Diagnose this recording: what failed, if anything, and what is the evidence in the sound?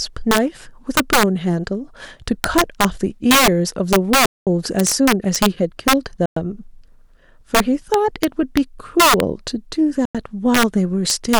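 Integer overflow, throughout: loud peaks snap into harsh cracks, sharper than clipping. At the sample-format conversion stage, gain about 8 dB too hot wraps a small fraction of samples to the opposite sign.

Playback stall, 4.26 to 4.47 s: the speech drops to silence for about 208 ms, then resumes. At the playback stage, the player was likely starved of data or its thread blocked.

Time-compressed catch-up, 4.47 to 5.85 s: speech runs 1.15 times fast at unchanged pitch. The player cuts and cross-fades small pieces to clear its backlog.

Bluetooth stall, 6.26 s and 10.05 s: silent gaps of 107 ms and 93 ms, then speech continues. Interference likely delayed packets on the wireless link, emptying the headphone buffer.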